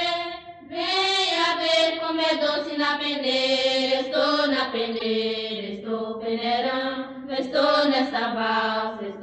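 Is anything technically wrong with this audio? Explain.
Yes. From 4.93 to 5.06 s there's a corrupt frame decoded: about seven damaged frames played anyway, so energy lands at wrong frequencies as a fairly loud chirpy noise burst.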